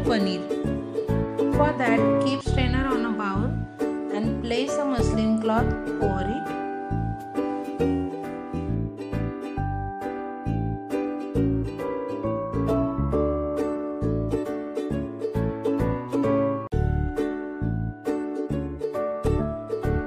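No technical faults can be heard at any point in the audio, and the signal stays intact and steady throughout.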